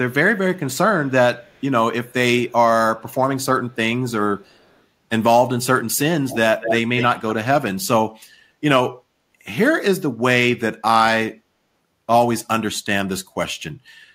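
Early on, faint scraps of echo leak come back at 1.4–1.63 s, 3.1–3.14 s and 4.42–4.77 s, trailing the speech by 275 ms and sitting very far down, barely audible. Then at 6.29–6.37, 6.6–6.77 and 6.97–7.06 s the echo returns at 231 ms and much louder, nearly level with the speech in the middle burst. The likely cause is a far-end loudspeaker whose echo canceller let its own playback slip back into the call.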